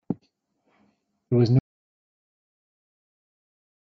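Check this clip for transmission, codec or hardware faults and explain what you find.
There is one fault: an audio dropout to silence from 1.59 s, running to the end of the clip. The speech stops mid-flow and is replaced by silence, with no room tone or noise floor left. The likely cause is a lost input, such as a disconnected device, failed link or mute, while recording carried on writing zeros. On a waveform the trace collapses to a flat line; on a spectrogram everything after that point turns uniformly black.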